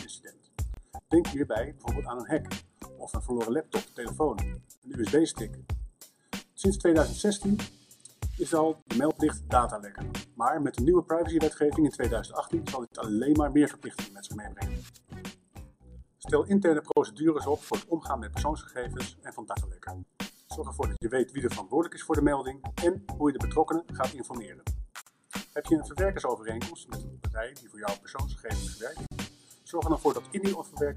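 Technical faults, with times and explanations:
0.74, 4.77, 8.82, 12.87, 16.92, 20.97, 25.02 and 29.07 s: gap at a join of encoded pieces. Short silences recur every 4 s, about 29.5 ms the first time and 49 ms after that. Separately encoded segments were butted together with their encoder start delay and final-frame padding left in. The edges are smeared, and the sound resumes exactly where it stopped.
3.14, 9.11 and 19.55 s: dropped buffer (overrun). Each is a jump in the sound with no silence. A piece of audio vanished and its two sides were spliced directly, likely because samples were not collected before being overwritten. Roughly 20 ms went at the first two and around 70 ms at 19.55 s.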